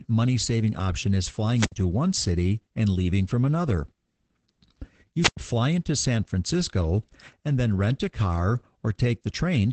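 From start to end the speech carries Opus voice compression: a muffled, slightly hoarse and robotic tone from coarse SILK coding, which fits a rate near 12 kbps. On a spectrogram, energy stops at a hard ceiling around 8.6 kHz.

At 1.54 to 1.73 s, between "money saving option is" and "one city and leaving", a wireless microphone squelch dropout occurs. The fading radio signal brings a short burst of hiss before the receiver mutes for about 65 ms. The waveform shows noise, then a flat gap.

At 5.21 to 5.37 s, just before "fly into", a second squelch dropout gives the same rise of static and then a longer mute of about 99 ms. The spectrogram shows broadband noise and then a blank vertical band before the speech returns.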